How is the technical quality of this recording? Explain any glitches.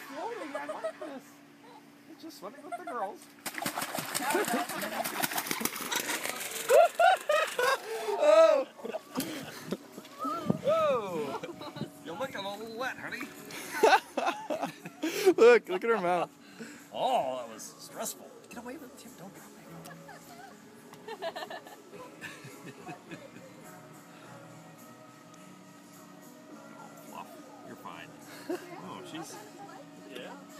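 The recording has one clear glitch, a channel delay (doubling). From 5.80 to 8.91 s, one channel runs 40 ms behind the other, and when the two are summed to mono the late copy stands apart as a second, equal-level image, heard as a short slap or doubled attack on each sound.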